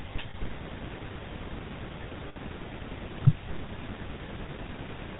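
Throughout, the speech carries the buzzy, gravelly roughness of the GSM full-rate codec, which fits 13 kbps. The codec passes nothing above 4 kHz. Unlike plain band-limiting, which only muffles, the grit is woven into the voice itself.

At 0.30 s, for 0.05 s, and again at 2.28 s, for about 0.09 s, lost GSM frames are covered by repeating the last good frame. The gap becomes a short metallic ring rather than a silent dropout or a hard click.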